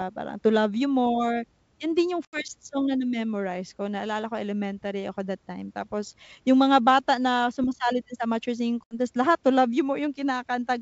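At 2.25 s, after "yun din yung", and at 8.84 s, after "din sa amateur singing", packet loss on the ADPCM call leaves hard-edged silent gaps of 80 ms and 70 ms. The decoder's predictor then mismatches the sender's, so the speech resumes with brief distortion.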